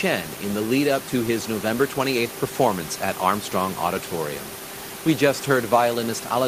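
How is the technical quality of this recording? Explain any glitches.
No glitches can be heard in the recording. A room noise sits about 16 dB below the speech, and that belongs to the space where it was recorded, not to any fault in the system.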